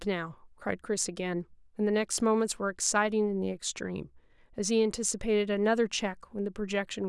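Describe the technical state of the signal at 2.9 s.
At 2.9 s the speech signal is intact, with no audible fault at that moment.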